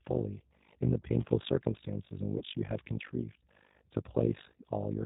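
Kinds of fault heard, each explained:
Overlap-add ripple: Frames rejoined with a mismatched overlap make the level swing by about 60 dB around 50 times a second, producing a harsh, robotic flutter throughout the speech.
G.729 codec: Speech is rebuilt from a filter, pitch predictor and sparse pulses, so nothing passes above 4 kHz and the voice sounds plainly rough and synthetic, consistent with an 8 kbit/s stream.
VoIP packet loss concealed by the speech codec: Around 2.38 to 2.43 s, roughly 30 ms of audio is replaced by a fading extrapolation of the preceding sound, consistent with one lost packet.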